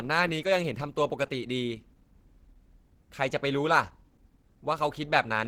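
From start to end the speech carries plainly audible grainy, hoarse roughness, likely from Opus compression at a rate around 16 kbps in its hybrid mode. Missing detail is filled with noise rather than left as gaps, so it sounds rough, not the watery swirl of MP3.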